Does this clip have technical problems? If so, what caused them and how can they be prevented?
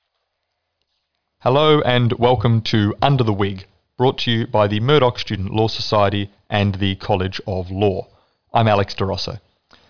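No, nothing technical goes wrong anywhere in this speech recording, so there's nothing to trace back or guard against here.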